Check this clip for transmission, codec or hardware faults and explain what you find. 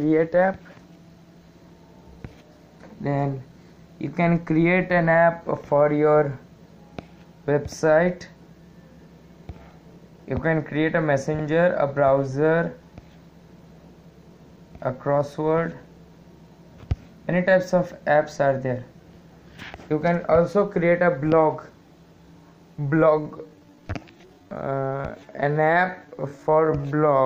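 One fault is present: a time-stretched section running from 23.17 s to 27.25 s, the end of the clip. Software likely stretched that stretch of audio to fill a longer slot, slowing it to about 0.65 times its original pace while holding pitch by repeating short fragments. The sound slows abruptly at 23.17 s with no drop in pitch, and it drags until the end.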